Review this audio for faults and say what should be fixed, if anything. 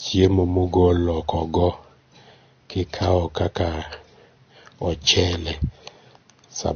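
Throughout the speech there is a hard ceiling at 6.5 kHz, with the artefacts of both codecs heard together: the mark of transcoding between lossy codecs. The likely chain is an MP3 stage near 48 kbit/s followed by Vorbis near 34 kbit/s. The second encoder spends its scarce bits re-coding the first one's artefacts and adds its own, and the lower cut-off remains. On a spectrogram, energy stops abruptly at 6.5 kHz, with patchy, blocky holes below it. Encode once, from the original uncompressed source.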